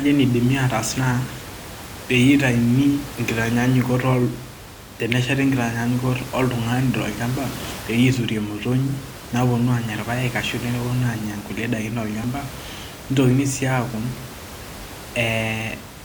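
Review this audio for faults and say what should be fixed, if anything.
There's one tiny skip at 12.24 s where the waveform jumps. That's an overlap between stream segments: two segments claimed the same stretch of time, so the player trimmed the shared bit even though it wasn't actually duplicated, and a few milliseconds of real audio vanished. It fits segments about 6 seconds long. The room noise sits about 15 dB under the speech. To fix it, make sure segment timestamps butt up exactly against each other instead of overlapping.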